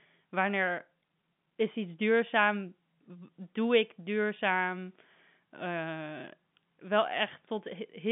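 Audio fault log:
No fault can be heard in the speech. The G.711 telephone coding keeps the audio within a line band of about 150 Hz to 3.6 kHz, as that path does when working normally.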